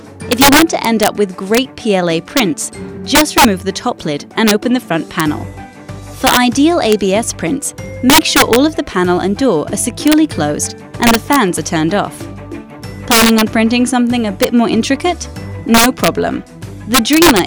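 Integer overflow runs throughout: the level was pushed about 8 dB past the integer limit, so roughly one percent of samples wrap to the opposite sign. Peaks crack, and the waveform shows spikes flipping across the full range, with vertical broadband streaks on a spectrogram.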